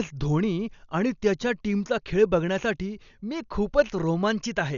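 A speech recording, likely passed through Dolby Digital compression at a bitrate low enough to suggest roughly 48 kbps, carries heavy codec damage throughout: nothing survives above 7 kHz, so it sounds dull, and noise-filled bands leave a rough, fluttering texture around voiced tones.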